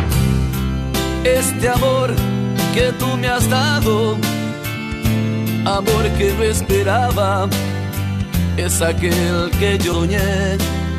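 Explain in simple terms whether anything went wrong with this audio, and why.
At 8.59 s and 9.92 s the sound jumps ahead: compressed frames skipped, losing about 50 ms, then about 150 ms, of 23.2 ms chunks.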